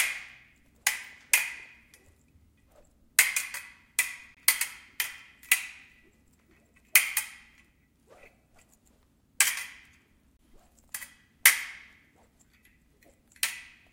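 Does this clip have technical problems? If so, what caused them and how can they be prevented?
Yes. A gap between chunks breaks up this everyday sound at 4.35 s and again at 10.37 s. Each is a hard-edged hole of about 23 ms, and the two are 6 s apart. That fits a short silent block left at each join between 6-second chunks. On a waveform each gap is a flat, near-silent strip with abrupt edges. On a spectrogram it is a thin vertical blank band across all frequencies. Trimming codec padding and scheduling each chunk to start exactly where the previous one ends prevents it.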